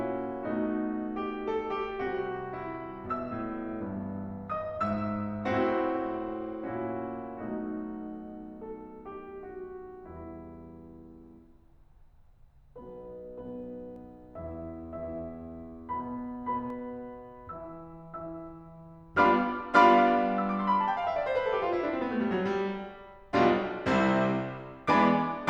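From 2.14 s to 6.83 s the music goes through a call bitrate drop. The bandwidth estimate collapsed and the encoder was told to spend far fewer bits, and the result points to a fall from something like 128 kbps down to around 28 kbps, held at the bottom for about 4.6 s. Over that stretch the top end is shaved off and the coded detail turns coarse, so the music sounds muffled and a bit watery until the rate climbs back.

Later, from 13.96 s to 16.70 s, there's a doubled audio track: a second full-band copy of the music sits roughly a tenth of a second behind the first, around 5 dB quieter. It's a clean, dry repeat with no room colour or decay, so it reads as a slapback smear, not a reverberant echo, and it cuts in and out abruptly at both ends. The likely culprit is the same audio being picked up again through a slower path and mixed in.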